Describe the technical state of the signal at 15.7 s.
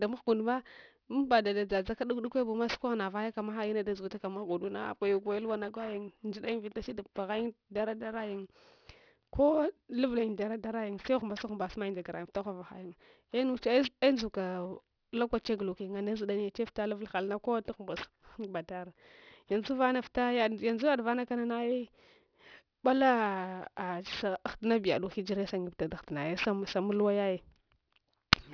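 At 15.7 s the speech carries aliasing, and it runs through the whole clip. The audio was resampled down without a proper low-pass filter first. The band stops hard at about 5.5 kHz, which fits a new rate near 11 kHz. Energy that lay above that edge has folded back below it as false tones. They sit roughly 15 dB under the speech. Sibilants sound gritty and metallic as a result.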